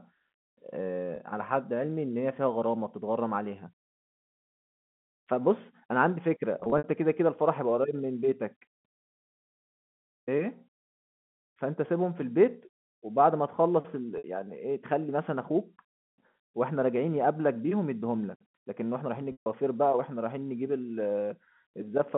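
Packet loss with pitch repetition appears four times. At 1.16 to 1.18 s, 20 ms drops out, which fits a single 20 ms packet. The gap is bridged by repeating the last pitch period, so it sounds like a brief held buzz. From 6.60 to 6.84 s, 120 ms is lost in scattered runs up to 60 ms, giving a stuttering, buzzy patch. At 14.18 to 14.24 s, 60 ms is held and fades. At 19.32 to 19.46 s, 140 ms fades toward silence before the speech cross-fades back, all within a 150 Hz to 3.4 kHz telephone band.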